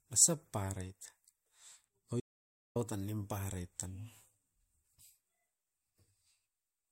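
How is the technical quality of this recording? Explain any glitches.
The recording has one clear glitch. From 2.20 to 2.76 s there is an audio dropout to silence, lasting about 0.55 s. The speech cuts off mid-flow into silence, with no room tone. The input was likely lost briefly while the recorder kept writing silence. Speech resumes with "tan nimparaiet tan", and whatever fell in the gap is gone.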